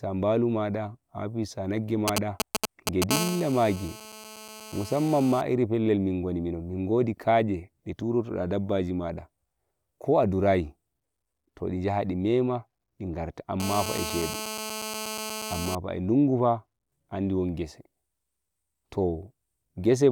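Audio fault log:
2.08–3.12 s, GSM signalling bursts: A galloping dit-dit-dit of short raspy buzzes, roughly as loud as the speech. A nearby 2G phone is exchanging short groups of radio bursts with the network, and the audio circuitry rectifies each group into sound. Unlike the steady call buzz that follows, it comes in broken clusters. Within each cluster the bursts repeat at about 217 Hz, which gives each buzz its pitch, while the gaps between clusters give the clipped, chattering rhythm rather than a continuous tone.
3.12–5.41 s and 13.60–15.75 s, GSM phone buzz: A hard, raspy 217 Hz buzz with many harmonics that runs continuously and ignores the speech. It sits about 11 dB below the speech in the first stretch and about 7 dB below in the second. The phone is in a call and transmits a burst 217 times a second, and the circuit demodulates each pulse. Its pitch and harsh edge set it apart from smoother 50 or 60 Hz mains hum. 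It also stays steady instead of galloping like the earlier signalling.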